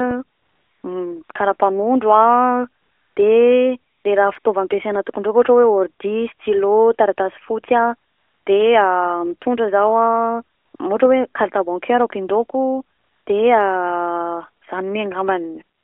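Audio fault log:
0.38 to 15.84 s, AMR comfort noise: ten short gaps, from about 40 ms to 460 ms long, scattered through the clip. In each, the phone judged the talker silent and stopped sending speech frames. The receiver filled the gap with smooth synthetic hiss built from a rough estimate of the background's level and spectrum. So the real background drops out and a steadier noise switches in. The longest gap runs from 0.38 to 0.84 s, just before "karapanondro a de le". Another runs from 2.82 to 3.16 s, between "karapanondro a" and "de le raha".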